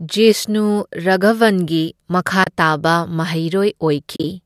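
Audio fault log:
2.44–2.47 s and 4.16–4.24 s, AAC frame loss with muting: the sound briefly drops into soft-edged holes that fade out and back in. At 2.44 s the gap lasts 30 ms. At 4.16 s about 50 ms goes missing in pieces across 80 ms, the longest stretch around 40 ms. The decoder zeroes each lost frame, and the overlapping transform windows smooth the edges. The 10 ms scale of the gaps fits the short frames of what is likely low-delay AAC coding, which can be heard as lightly coloured.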